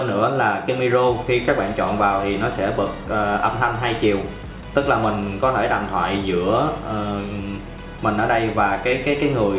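No faults detected; the sound is band-limited at 4 kHz, consistent with a narrowband G.711 mu-law call path.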